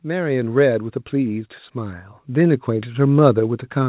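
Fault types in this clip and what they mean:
Automatic gain rising: the call's level control judged the input too quiet and kept lifting its gain from 0.05 s to the clip's end, so speech and background noise swell together, audible over the narrowband sound with nothing above 4 kHz. That slow joint rise separates it from a sudden step or from compressor pumping.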